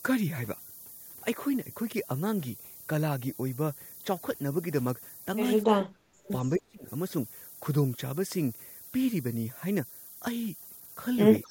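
The speech carries a steady, thin hiss throughout that climbs sharply toward the top of the band and sits only about 15 dB below the signal. This is low bit depth with noise shaping: the quantisation points to roughly 7 bits, and the rounding error has been pushed upward in frequency. Between 5.65 and 6.87 s the speech dips and breaks up for about a second in total, falling by around 40 dB at its deepest. This is likely speech suppressed in double talk, where an echo canceller, faced with both sides talking at once, attenuated the near talker along with the echo. Inside that window, from 6.24 to 6.59 s, a faint delayed copy of the speech is audible about 257 ms behind the original and roughly 30 dB down. The same echo leak returns from 11.42 s to the end, at roughly 35 dB down. The likely cause is a loudspeaker pickup that the far end's canceller did not fully remove.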